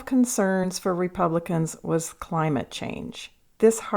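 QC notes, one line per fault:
0.63–0.66 s and 2.07 s, compressed frames skipped: the speech jumps forward by roughly one frame each time, consistent with 20 ms codec frames lost or rejected. The join shows as a brief blip or click.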